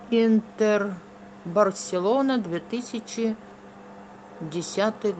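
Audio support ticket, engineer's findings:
No fault found in this speech clip. Call path via Opus working as expected; high end stops at about 8 kHz, consistent with wideband coding at a modest bitrate, around 32 kbps.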